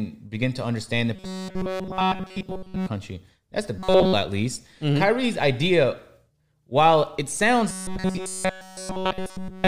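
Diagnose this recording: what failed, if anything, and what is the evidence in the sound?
Robotic sound from repeated short buffers occurs three times. It runs from 1.16 to 2.88 s, right after "begin to understand the", then from 3.78 to 4.14 s, just before "at least", and finally from 7.69 s to the end, after "while it sounds". The speech turns into a rigid, metallic buzz at 188 Hz. The likely failure is at the driver or buffer stage. Audio arrived too seldom, so a segment of about 5.3 ms was replayed in place of nearly all the real signal. That period fixes the pitch.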